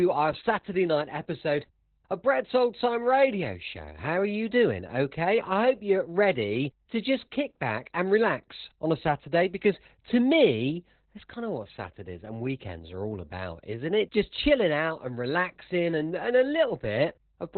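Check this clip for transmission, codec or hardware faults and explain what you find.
There's one fault, and it runs through the whole clip: Opus voice compression at a very low rate. The speech stops dead at about 4.2 kHz, which is narrowband, so the SILK linear-prediction coder was working on its own with no upper layer. Because it codes the excitation so coarsely, the voice comes out muffled, hoarse and a bit robotic. Damage that heavy fits a bitrate of around 8 kbps.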